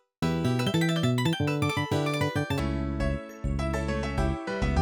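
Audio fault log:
0.00–2.59 s: audio read two samples at a time (double speed). The sound races through at 2.0 times its proper rate and sits an octave too high. The reader has taken each pair of samples as a single frame, as if the data held two channels or wider samples. So half the stream is skipped in effect, and time is squeezed.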